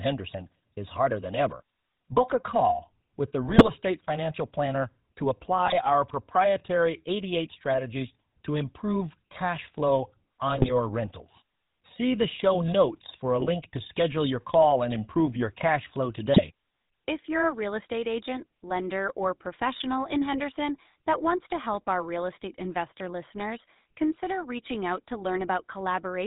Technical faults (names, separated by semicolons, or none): GSM full-rate codec; GSM bit errors